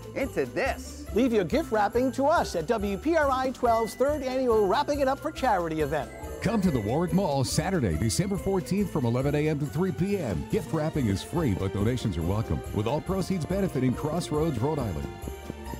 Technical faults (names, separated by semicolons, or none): train of clicks